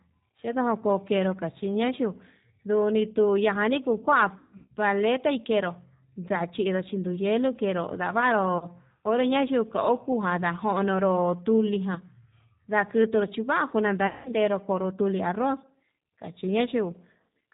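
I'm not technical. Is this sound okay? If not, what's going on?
No. Two problems can be heard.

The G.729 codec affects the whole recording. This is a phone-call compression method that doesn't send the real sound. It sends a rough description of how the voice is shaped and pitched, and the far end rebuilds speech from that. The rebuilt speech is plainly rough and slightly artificial. Everything above about 4 kHz is gone, so the voice sounds dull and boxy, like an old phone line.

VoIP packet loss concealed by the speech codec occurs four times: 4.38 to 4.72 s, 8.58 to 8.70 s, 11.94 to 11.98 s, and 14.07 to 14.32 s. Small chunks of the call went missing in transit. The decoder filled each gap by stretching the last bit of voice it had into a sound that fades away. The first and last gaps are the longest, lasting roughly a third and a quarter of a second.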